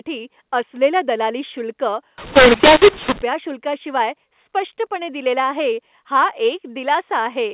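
Telephone speech that turns harsh and gritty from 2.18 to 3.22 s, after "असलेलं दलाली शुल्क" and before "शुल्काशिवाय स्पष्टपणे दिलेलं आहे", with loudness jumping unevenly and gaps filling with noise. This is mu-law and A-law mixed up: A-law samples were decoded as mu-law, scrambling levels within the 8 kHz G.711 stream.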